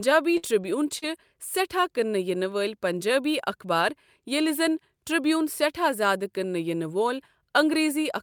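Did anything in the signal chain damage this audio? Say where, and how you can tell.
Yes. Burst of packet loss at 0.37 to 0.45 s: a network dropout whose last sound is held and faded for about 53 ms, then 60 ms of audio is skipped.

Lost packet rebuilt from error correction at 0.63, 0.69, 0.83, 1.02 and 1.14 s: in the codec, 20 ms frames decoded from low-bitrate backup copies sound rougher and noisier.

Short concealed packet loss at 0.99 to 1.04 s: a brief network gap where the decoder extends the prior sound for 33 ms, producing a smear and skipping about 40 ms.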